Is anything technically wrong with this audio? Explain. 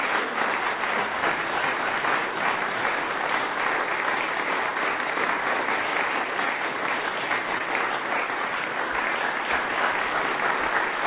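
Yes. Short concealed packet loss at 7.58 to 7.61 s: about 20 ms never arrived in time, so the receiver extended the preceding sound before blending back, leaving a brief smear or wobble.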